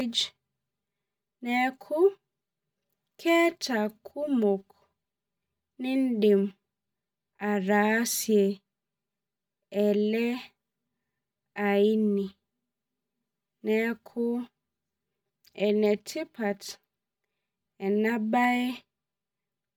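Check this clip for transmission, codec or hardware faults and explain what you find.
One fault runs through the whole speech clip: channel delay (comb filtering). One channel trails the other by roughly 5 ms, and when the two are summed to mono, matching content cancels at regular intervals. Fixed notches start near 100 Hz and repeat about every 200 Hz, giving a hollow, phasey tone. The notches stay put, unlike the sweeping notches of a phaser effect.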